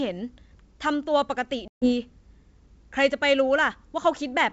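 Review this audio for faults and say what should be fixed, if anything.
Packet loss on an ADPCM call at 1.68–1.94 s over the 64 kbit/s G.722 link: roughly seven packets, 140 ms, go silent, and mismatched predictor state brings speech back slightly distorted. Packet loss concealment with a decoder state reset would fix it.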